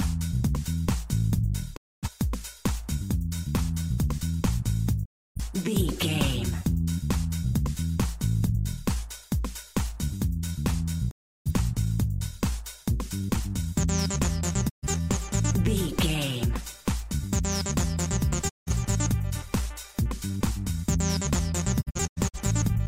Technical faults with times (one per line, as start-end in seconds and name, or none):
1.75-2.09 digital broadcast dropout
5.04-5.41 digital broadcast dropout
11.09-11.51 digital broadcast dropout
14.68-14.87 digital broadcast dropout
18.48-18.72 digital broadcast dropout
21.80-22.38 digital broadcast dropout